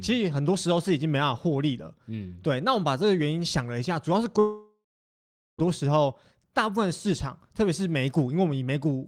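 At 4.39 s the speech turns into a fading buzz, then silence until 5.61 s. A long network dropout, likely lost packets, deleted 1.2 s.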